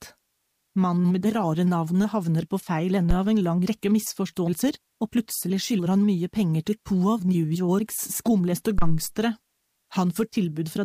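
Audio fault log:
3.11–3.16 s and 8.78–9.04 s, phantom power thump: a supply switching step passes through the coupling capacitors as deep thumps peaking near −11 dBFS, decaying in 13 and 56 ms.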